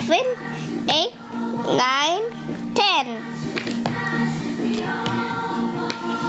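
Throughout, the level swells in quieter stretches and ducks under each loud sound, swinging around 20 dB: gain pumping, likely from excessive input gain driving a fast limiter. Nothing remains above 8 kHz, consistent with the call's codec bandwidth.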